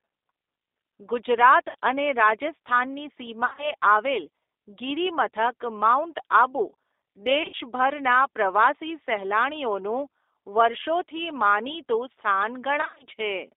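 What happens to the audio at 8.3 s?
At 8.3 s the speech carries G.729 codec damage, which runs through the whole clip. The sound points to G.729A at about 8 kbit/s. The codec does not store the waveform. It models the vocal tract with a filter, predicts the pitch, and codes each short frame as a few pulses. The band is held between 300 Hz and 3.7 kHz. So the speech sounds thin and muffled, with a plainly audible rough, synthetic buzz.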